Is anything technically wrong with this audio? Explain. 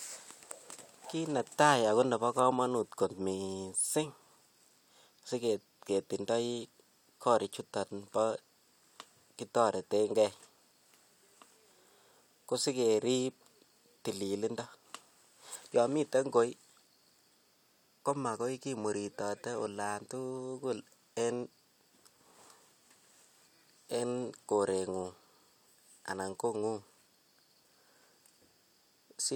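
No, nothing technically wrong can be heard in this speech recording. The sound carries on steadily throughout, with no audible fault at any point.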